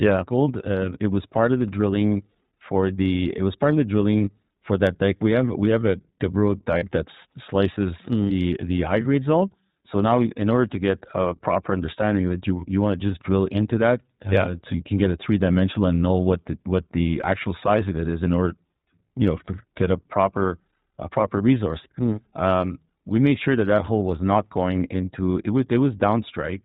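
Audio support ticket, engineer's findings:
iLBC codec, throughout: narrowband path, nothing above 4 kHz; clearly audible rough, slightly synthetic texture. Each 20 ms frame coded independently, stream consistent with about 15.2 kbps mode.

Lost iLBC frames, 6.78–6.84 s, just before "that slices mm the": 40 ms gap filled by decoder repeating last pitch cycle with added noise, heard as brief held buzzy vowel; clean again immediately since frames stand alone.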